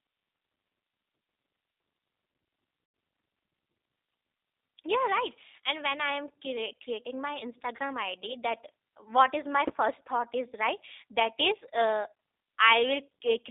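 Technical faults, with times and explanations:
throughout: G.729 codec. The speech sounds slightly rough and synthetic, confined to a narrow telephone band of about 300 Hz to 3.7 kHz, with nothing bright above it. This fits an 8 kbit/s G.729A coder. Rather than carrying the waveform, it rebuilds each 10 ms frame from a vocal tract filter, a pitch predictor and a handful of pulses. The buzzy, slightly artificial edge is what that sparse pulse model leaves audible.
2.86–2.94 s and 7.77–7.79 s: VoIP packet loss concealed by the speech codec. The sound briefly smears into a stretched tone or coloured noise that fades. The first gap spans 80 ms. The second spans 20 ms and is only a short blip. The pattern fits four lost packets and then one. The decoder filled each gap by repeating its last pitch and filter with falling gain. Because each frame builds on the previous one, the sound stays weak or distorted just after each gap.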